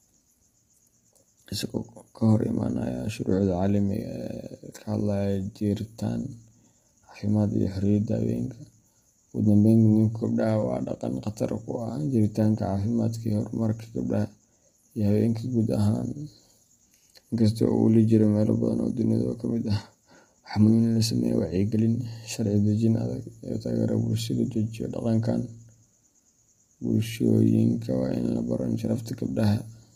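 From start to finish, the speech sounds rough and grainy. Noise fills the gaps between the harmonics, so the voice loses its clean tonal core. The top band sounds thin and partly synthetic. This is likely low-delay AAC compression, the AAC-ELD type used for video calls. Its short frames split pitch harmonics poorly and spend bits fast. The heavy damage fits a bitrate around 24 kbps, too little to keep the voice intact.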